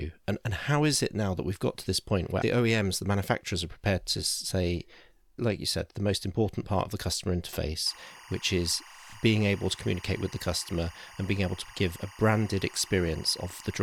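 A speech recording with timecode bleed from 7.87 s to the end, just after "part of the customer". A chirping warble sits about 20 dB under the speech. It flips between tones near 1 and 2 kHz. That's linear timecode leaking in from a nearby track or cable, which fits 23.976 fps code.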